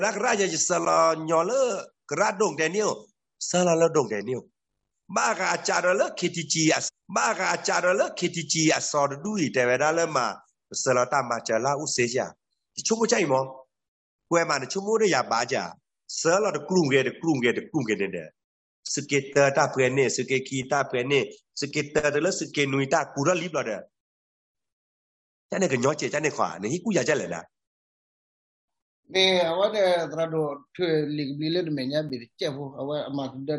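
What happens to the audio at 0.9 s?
At 0.85 s there is a block of digital silence about 10.7 ms long, which fits a 512-sample buffer left unfilled in time. The sound drops abruptly to silence and returns, giving a brief tick. The waveform shows a flat line with hard edges, and the spectrogram shows a thin blank column.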